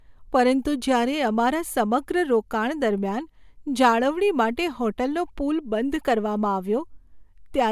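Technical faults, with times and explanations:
No technical faults are present; the speech signal stays continuous across the whole recording.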